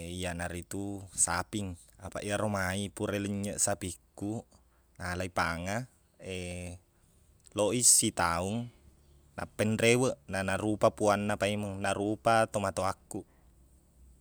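No technical faults can be heard anywhere in the recording; the signal stays steady and intact throughout.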